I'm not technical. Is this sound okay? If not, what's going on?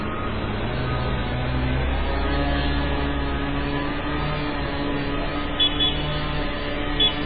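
No. The audio was most likely squeezed hard by MP3 compression, which throws away detail to save space. Throughout, everything above about 4.9 kHz is missing, so it sounds dull and muffled, with a watery, swirling quality and blurred sharp sounds.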